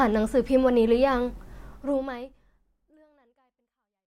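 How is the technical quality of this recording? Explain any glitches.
Nothing stood out as a glitch on listening to this speech recording; the only change in level is a smooth, deliberate-sounding fade-out that begins around a second and a half in and runs to the end.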